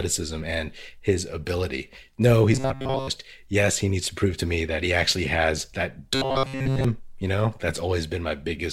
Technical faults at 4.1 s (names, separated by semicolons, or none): none